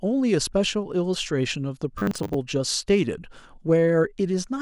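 Robotic sound from repeated short buffers, 1.98 to 2.34 s: the speech collapses into a metallic 100 Hz buzz, likely from a 10 ms buffer replayed, with roughly half the audio skipped.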